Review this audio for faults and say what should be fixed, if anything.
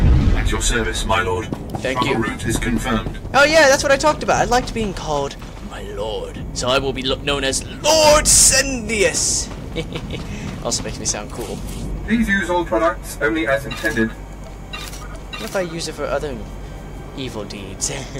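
Hard clipping runs through the whole clip: peaks were driven about 11 dB past what the signal path could pass, so roughly one to two percent of samples are sheared flat, giving crackle and harsh fuzz on louder moments. The waveform shows squared-off tops, and the spectrogram shows bright vertical smears of harmonics reaching high up. To prevent it, set gain so peaks stay below full scale with headroom to spare, or place a limiter ahead of the overloading stage.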